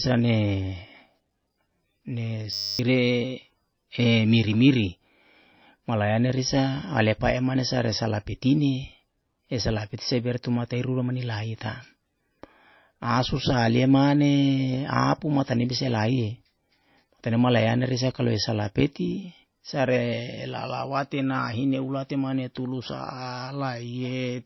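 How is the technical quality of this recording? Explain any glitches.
The recording has two clear problems: dull, band-limited speech throughout, and a brief buzzing freeze near the start.

Low-bitrate audio saved at a high bitrate: Across the whole clip the speech sounds muffled and smeared, with nothing at all above about 5.8 kHz and the swirly, watery texture of heavy MP3 compression. The likely cause is an MP3 first made at a very low bitrate, around 23 kbit/s, later re-encoded at 256 kbit/s. The larger file keeps the first encoder's missing treble and artefacts and cannot restore them.

System hang loop: From 2.53 to 2.79 s the speech stops and is replaced by a hard, steady 100 Hz buzz. The system froze while the sound hardware kept replaying the same 10 ms piece of audio from its buffer, repeating it about 26 times. The rapid repetition is what makes the buzz. About a third of a second of speech is lost and never recovered.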